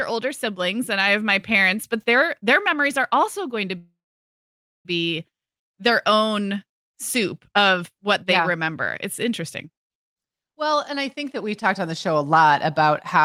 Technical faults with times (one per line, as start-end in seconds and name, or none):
3.77-4.87 call audio freeze